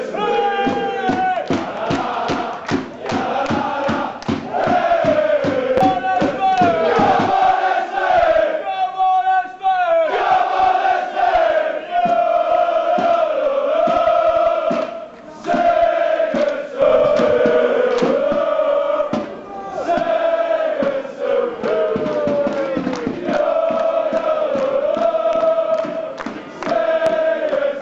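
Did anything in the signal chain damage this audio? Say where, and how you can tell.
Yes. A loud pop appears twice, at 5.77 to 5.80 s and again at 27.06 to 27.09 s. Each is a single sharp click-thump about 30 ms long, peaking roughly 15 dB above the surrounding audio, which continues unbroken beneath it. The likely cause is in the analogue wiring, where a plug disturbance, switch transient or static discharge added a brief voltage pulse that the downstream circuitry shaped into this short burst.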